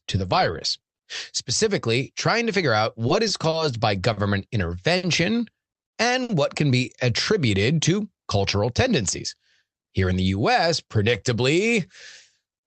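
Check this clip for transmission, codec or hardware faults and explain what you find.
Two transmission faults appear in this speech, both from the call's jitter buffer. The Opus-style call coding is also audible as coding noise, with the top end limited to about 8 kHz.

Short stall from a late packet, at 3.50, 4.13, 4.97 and 6.23 s, the last just before "what can be attributed". Packets arrived late, so the receiver held the current sound for 30, 40, 60 and 60 ms. Each stall is a brief stretched hold with a slight buzz or dip. Nothing is lost.

Jitter buffer speed-up, from 8.71 to 10.12 s, between "be attributed to cultural" and "in the". Excess buffered audio was trimmed by cutting tiny pitch-period slices, about a tenth of a second in total. The speech runs about 8 percent faster at unchanged pitch and sounds hurried.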